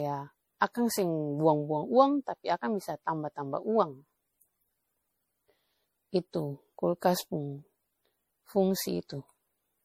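Repeated lossy re-encoding has likely left this speech recording with generation loss throughout. The texture points to an MP3 chain at around 64 kbit/s, decoded and encoded again something like seven times, each pass requantising on a shifted frame grid. The noise and spectral gaps from every pass stack up, so the speech sounds swirly, hollow and smeared well beyond what that bitrate alone would cause, and consonant attacks are blurred.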